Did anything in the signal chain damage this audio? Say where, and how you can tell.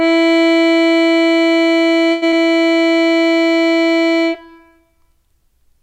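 Yes. From 2.11 to 2.24 s the music stops advancing and a fading buzz fills about 105 ms before resuming where it stopped. This is a call audio freeze, likely a network stall that emptied the jitter buffer. A spectrogram shows smeared, decaying partials there.

At 2.30 to 2.34 s, short concealed packet loss at the decoder: about 21 ms of extrapolated sound bridges a hole, and about 60 ms of music is gone.

From 2.73 to 3.46 s, a jitter buffer slow-down repeats pitch periods, adding 39 ms and playing at 95% speed. The spectrogram shows stretched events at unchanged pitch.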